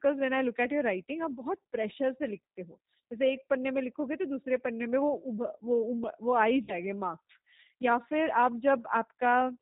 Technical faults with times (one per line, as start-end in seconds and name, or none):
0.00-9.62 G.729 codec
6.64-6.74 VoIP packet loss concealed by the speech codec